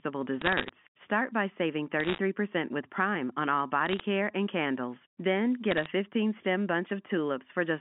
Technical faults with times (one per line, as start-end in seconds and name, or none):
0.41-0.69 bit errors on a digital phone line
2.00-2.18 bit errors on a digital phone line
3.86-4.00 bit errors on a digital phone line
5.71-5.86 bit errors on a digital phone line